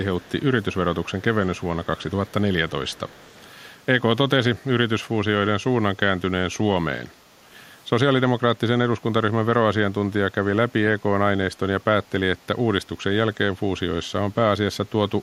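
Within the first few seconds, faint echo leak appears five times: at 0.2 to 0.43 s, 1.05 to 1.22 s, 1.56 to 1.64 s, 1.84 to 2.32 s and 2.88 to 3.52 s. Each time a delayed copy of the speech follows about 0.33 s behind. It sits far below the main speech and comes in short scraps. The likely cause is a loudspeaker at the far end whose echo canceller let some of the returning sound through.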